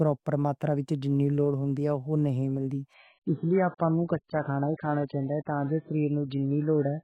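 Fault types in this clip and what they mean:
Adaptive stream at a lower bitrate: At 2.94 s the speech abruptly loses everything above 4.7 kHz, with no gap. It stays dull and artefact-laden to the end. The sound fits a switch from AAC at 96 kbit/s to about 9 kbit/s.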